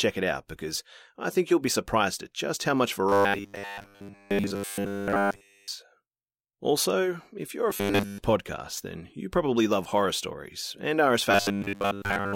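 From 3.09 to 5.68 s, after "at just how much", the speech collapses into robotic sound from repeated short buffers, a rigid metallic buzz at 100 Hz. It is likely caused by audio arriving too late, so roughly 10 ms chunks are looped in place of the skipped material. It recurs, with somewhat less of the audio looped, from 7.70 to 8.18 s, before "podcast then you probably", and from 11.31 s to the end. A spectrogram shows evenly spaced harmonics at multiples of 100 Hz, and the waveform repeats identical 10 ms cycles.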